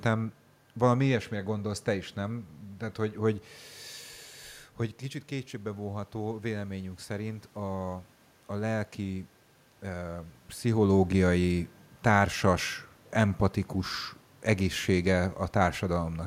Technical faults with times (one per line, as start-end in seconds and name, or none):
4.78-8.13 automatic gain rising